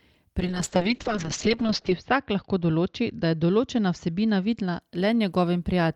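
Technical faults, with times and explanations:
0.4–4.87 s, call bitrate drop: The speech turns rough and watery, and muffled as the upper band narrows from 20 kHz to 8 kHz. The worst stretch lasts 1.53 s. The encoder was starved of bits, which fits a fall from about 32 to 7 kbps.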